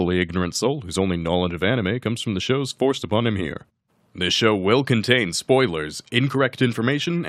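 Nothing here is technically wrong: it's a short stretch of speech, and there's no fault anywhere in it to point to.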